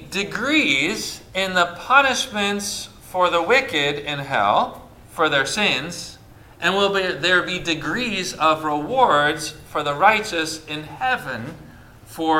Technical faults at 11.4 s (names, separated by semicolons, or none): none